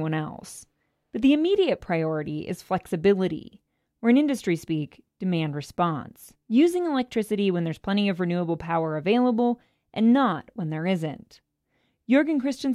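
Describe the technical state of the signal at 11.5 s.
At 11.5 s the speech signal is intact, with no audible technical fault at that moment.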